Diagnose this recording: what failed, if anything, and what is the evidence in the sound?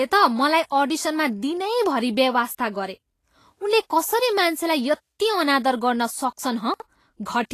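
The whole speech track has the grainy, hissy texture of a lossy codec pushed too hard. Nothing comes through above 14.1 kHz, and the remaining treble is smeared into noise, so sibilants sound rough and consonant attacks blur. That fits a likely Vorbis encode at a low bitrate, somewhere around 35 kbps. The encoder quantises the residue sitting on its spectral floor so coarsely that fine high-frequency detail turns into noise of similar energy.

There's a separate glitch between 6.74 and 6.82 s where the speech briefly jumbles. It sounds like a 20 ms piece of audio turned up late and played after the chunks that should have followed it. From the timing it landed three chunks behind, so nothing is missing, just reordered. That points at the buffer or transport stage, where a chunk was written or delivered out of sequence, leaving three abrupt joins.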